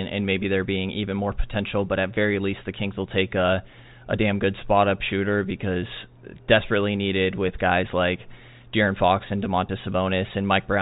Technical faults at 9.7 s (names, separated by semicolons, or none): packet loss with pitch repetition